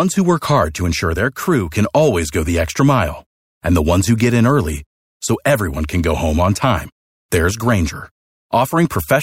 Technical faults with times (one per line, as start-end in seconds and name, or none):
none